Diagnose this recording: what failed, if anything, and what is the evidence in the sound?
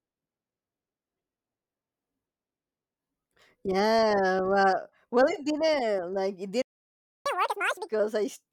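The failure is at the playback stage. Right after "it didn't like it", the output goes silent from 6.62 s to 7.26 s, a gap of about 0.64 s, before the speech resumes where it left off. This is a playback stall, most likely the player running dry or its audio thread being blocked. On a waveform the trace drops to a flat line mid-utterance. On a spectrogram there is a clean, full-band blank column with hard edges.

The playback then recovers by catching up at higher speed. From 7.26 s to 7.89 s the backlog plays at twice normal speed, so the speech sounds rushed and raised by roughly ten semitones before snapping back to normal. The player is resampling its queued audio to regain the lost time. A spectrogram shows the harmonics and formants shifted upward and packed closer together in time. The waveform shows syllables compressed to half their length.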